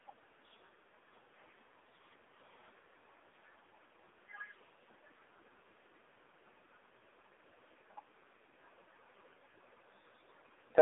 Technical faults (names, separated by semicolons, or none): AMR narrowband mobile codec